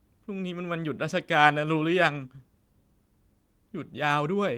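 Nothing stood out on listening to this speech recording.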